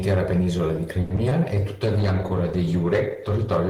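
Speech, with three separate network-related faults clustered just after "penisola di" and a quality change later on. From 1.01 to 1.12 s there is a short stall from a late packet. The jitter buffer ran dry, so the receiver stretched the last sound for about 90 ms until the packet arrived, then resumed from the same point. Nothing is lost. The sound is simply held too long and everything after it lands about 90 ms later. That separates it from the two brief gaps that follow. At 1.16 to 1.19 s and again at 1.29 to 1.33 s there is short concealed packet loss. Each time, about 20 ms of audio never arrived and the decoder papered over the hole by extending the preceding sound before blending back. These come across as quick smears or wobbles rather than a held sound, and real material is actually missing, so a short consonant can go. From 1.86 s to the end there is a call bitrate drop, from 32 kbps down to 13 kbps, staying at its lowest for about 1.2 s. 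The encoder, told to spend far fewer bits, codes more coarsely, giving a rougher, more muffled, watery quality. Unlike the brief glitches, this degradation is continuous and lasts through the rest of the clip.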